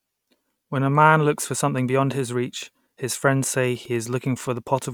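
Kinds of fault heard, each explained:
Wi-Fi interference: a nearby Wi-Fi radio is leaking into the audio circuitry, which rectifies its transmissions into audible clicks. Here it starts at about 3.62 s, right after "his reach his friends", and runs to the end of the clip as a steady tick roughly ten times a second, matching a 102.4 ms beacon interval. It sits well below the speech, around 35 dB down, so it's faint but unmistakably regular.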